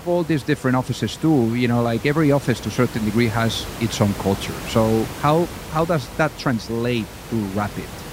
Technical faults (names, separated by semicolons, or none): none